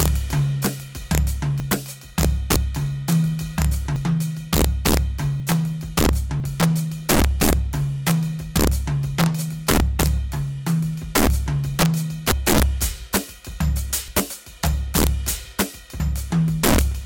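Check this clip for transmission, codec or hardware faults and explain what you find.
Three faults are present in this music: integer overflow on loud peaks, stacked lossy-codec artefacts, and eight skips in the sound.

Integer overflow runs through the whole clip. The signal is driven about 8 dB past full scale, and instead of being limited, the samples that exceed the integer range, only a percent or two of them, wrap around to the opposite extreme. Each wrapped peak becomes an instant full-range jump, heard as harsh, splintering cracks on the loudest moments. These are far sharper and more abrupt than ordinary clipping distortion.

The codec damage is most likely transcoding between lossy codecs. The sound points to an MP3 pass at around 75 kbit/s followed by a Vorbis encode near 69 kbit/s. The second encoder spent its limited bits reproducing the first one's artefacts and then added its own, so the artefacts of both are heard together. 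The lowest cut-off in the chain remains.

Dropped buffers, likely from overruns, occur at 1.6, 2.56, 3.96, 5.4, 6.4, 12.32, 14.08 and 16.0 s. The samples in each case were overwritten before they could be read, and the audio on either side was spliced directly. There is no gap of silence, only a sudden jump forward in the music. The missing pieces range from a few hundredths of a second to about a tenth, with the longest skips at 3.96 and 12.32 s.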